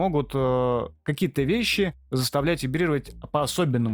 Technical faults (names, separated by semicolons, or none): none